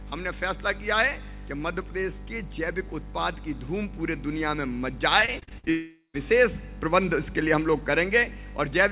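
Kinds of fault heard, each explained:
Repeated packet loss (robotic sound): From 5.20 to 5.68 s, seven short gaps, the longest 50 ms, are each patched by repeating the preceding sound, about a third of that span. The result is choppy. A spectrogram shows repeated smeared, stretched blocks; the waveform shows looped fragments.
Long network dropout: From 5.70 to 6.16 s the sound is carried on as a buzz or hiss that fades, ending in about 150 ms of silence before the audio resumes, likely from a long loss of incoming audio. A spectrogram shows a flat fading smear, then blankness below 4 kHz.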